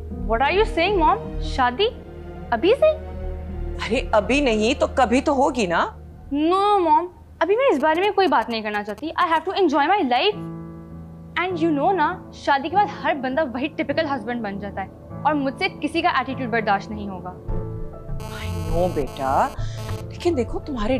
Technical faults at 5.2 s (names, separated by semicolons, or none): none